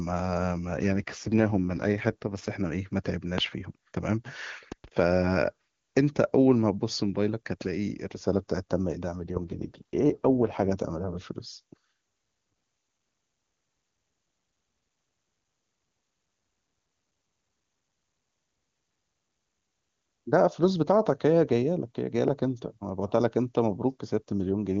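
From 0.78 to 2.5 s the speech undergoes an AMR rate drop: the link seems to have forced the wideband codec down to a much lower mode, which fits a fall from 23.85 to 8.85 kbit/s. With fewer bits for the vocal tract model, the voice turns rough, buzzy and synthetic. The bandwidth stays the same and nothing drops out. Clarity returns once the higher rate resumes, matching the clean HD Voice quality heard elsewhere.

At 3.38 to 3.41 s a loud pop sits on top of the speech, a single sharp click roughly 20 dB above the signal. The likely cause is a voltage transient such as a plug, switch or static discharge. From 4.72 to 4.86 s two pops of similar strength follow in quick succession. In both cases the speech carries on underneath.

A second AMR rate drop runs from 9.16 to 10.72 s, with the same coarse, raspy texture until the codec recovers.

At 22.28 to 22.30 s a final single pop, about 15 dB above the speech, cracks briefly over the audio.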